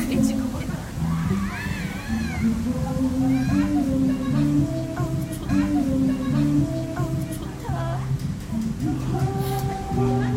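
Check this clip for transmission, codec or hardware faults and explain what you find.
One transmission fault is present: a stream segment repeated. From 5.48 to 7.48 s, about 2.0 s of sound that has already played comes round again after a small blip at the jump back, because the player queued the same segment twice. Unlike a buffer stutter's rapid short loops, this is one long, whole replay.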